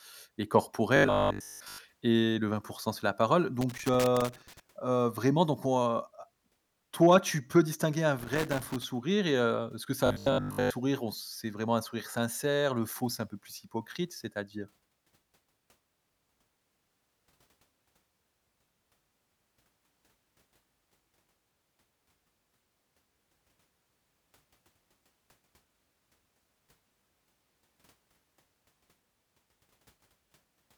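From 0.96 to 1.78 s, just before "et le", the speech turns into a rigid, metallic buzz at 50 Hz that only loosely tracks the syllables. This is robotic sound from repeated short buffers, likely caused by audio arriving too slowly, so the playback loops a fragment of about 20 ms and skips most of the real signal. Looping a 20 ms piece forces that fixed 50 Hz pitch.

Between "c'est la parole" and "vraiment donc on heu", from 3.61 to 4.60 s, an irregular burst of scratchy crackle breaks up the sound. This is loose connector crackle: a poor contact making and breaking chops the signal into ragged fragments. The same crackle returns from 8.19 to 8.84 s, after "tu peux distinguer un" and before "et heu".

From 10.06 to 10.70 s, the same 50 Hz robotic buzz appears again, with roughly 20 ms fragments repeating in place of the real audio.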